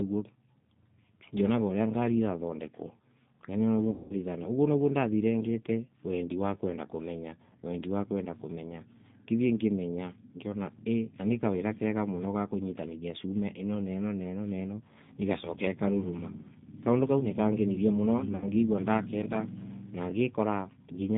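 Throughout, the speech passes through a G.729 codec, which rebuilds each 10 ms frame from a vocal tract filter, a pitch predictor and a few pulses. The line carries only about 150 Hz to 3.7 kHz, and the damage is plainly audible: thin, rough, slightly synthetic speech, consistent with the 8 kbit/s G.729A variant.

VoIP packet loss concealed by the speech codec occurs at 3.90 to 4.16 s, about 200 ms missing, and again at 18.36 to 18.46 s, about 60 ms. The decoder stretches its last pitch and filter with falling gain, giving a buzzy tone or coloured noise that fades, and the speech stays weakened briefly after packets resume.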